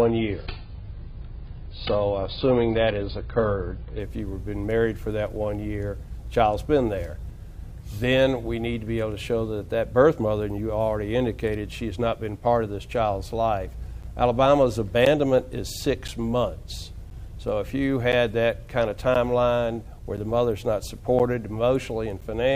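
The audio opens with an adaptive stream starting at a low bitrate. Until 4.0 s nothing sounds above 5 kHz, which suggests a very low AAC rate. Quality then jumps cleanly to a better version with no gap, unlike an interruption. From 14.03 to 22.22 s, periodic USB or driver dropouts leave roughly ten silent gaps of about 10 ms, spaced exactly 1.024 s apart. The strictly regular spacing, unlike random network glitches, points to a background task stalling the bus or driver.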